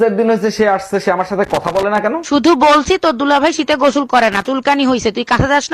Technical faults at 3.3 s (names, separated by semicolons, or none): none